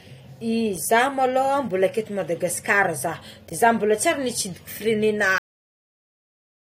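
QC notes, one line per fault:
5.38–6.78 s, cut-off end: the final stretch of audio buffers was never written to the file or sent to playback, so the recording halts abruptly at 5.38 s in the middle of the speech rather than at a natural pause. With no samples behind that point, nothing can fade or ring out. The sound drops straight to digital silence, which holds for the remaining 1.4 s of the clip.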